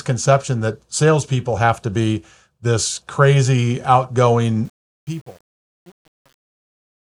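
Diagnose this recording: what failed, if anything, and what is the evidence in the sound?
Truncation distortion on a fade runs from 4.65 s to the end at 7.02 s, and it is worst from 4.87 s onward. The speech fade-out that begins around 4.65 s goes gritty rather than thinning smoothly. The fault sits in the volume or sample-format conversion stage, which points to about 8-bit resolution with no dither. As the level falls, the waveform collapses onto a few coarse steps.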